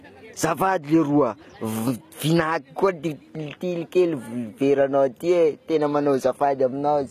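Speech runs through the whole recording with a gritty, metallic upper range, s sounds coming out lispy, and nothing above about 14.9 kHz. That points to HE-AAC compression, likely at a very low bitrate near 20 kbps, where the treble is rebuilt from copied lower bands.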